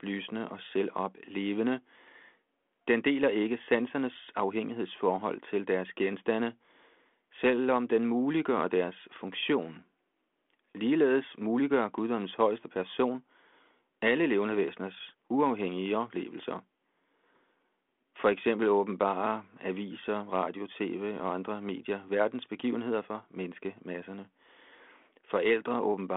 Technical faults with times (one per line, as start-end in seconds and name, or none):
none